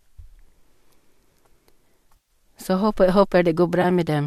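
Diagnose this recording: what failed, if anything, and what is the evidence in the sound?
Processor overload crackle, at the driver and buffer stage, runs from 0.49 to 1.22 s. It is a gritty burst of hard-edged skips: something like thirty buffers of roughly 5 ms each were missed and simply dropped. Unlike network loss, the gaps are tiny and rapid, and there is no smeared fill.

AAC frame loss with concealment, at the network and codec stage, hits twice. From 2.17 to 2.29 s, 110 ms is lost and replaced by a smeared, noisy patch. From 3.82 to 3.85 s, a 20 ms loss leaves a brief phasey blur. The soft, synthesized texture separates these from buffer clicks. The speech, likely carried over low-delay AAC, has only light coding roughness.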